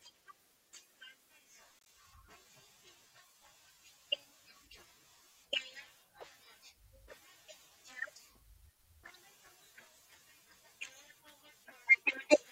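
At 1.81 to 1.85 s a corrupt frame decoded leaves a faint, very quiet glitch: damaged bits in a couple of frames misplace energy, showing as a brief off-pattern spectrogram smudge.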